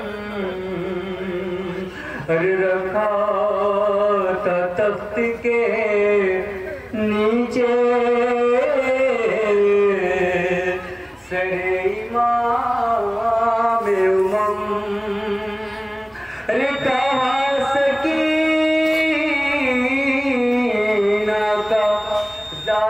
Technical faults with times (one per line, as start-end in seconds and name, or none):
16.49-22.90 feedback whistle